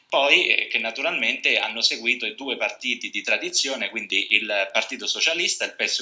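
Regular ticks run through the whole sound at 10 per second, heard only while there is signal. This is a resampler restarted on every block. Each 100 ms block was converted on its own. At every block edge, the converter lacked the real neighbouring samples and filled in silence or wrapped data. Each boundary therefore carries a small error, and together they form the tick train. The downsampling fits a 48 kHz to 16 kHz conversion.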